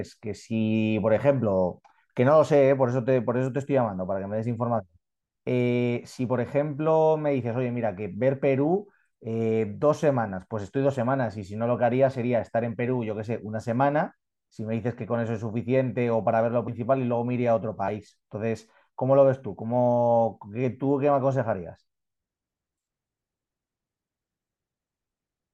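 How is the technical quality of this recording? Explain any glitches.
Two brief glitches mark this speech recording, both from compressed frames skipped. At 16.67 s and again at 17.87 s, the audio jumps forward. The first jump loses roughly 50 ms and the second about 20 ms, which fits whole 24 ms frames being missing or rejected by the decoder as damaged.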